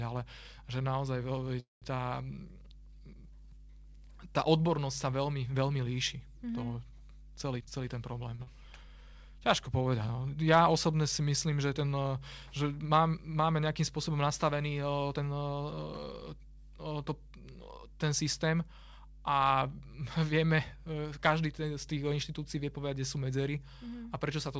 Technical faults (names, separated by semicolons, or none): mains hum; call audio freeze; jitter buffer speed-up; short stall from a late packet; skip ahead; jitter buffer slow-down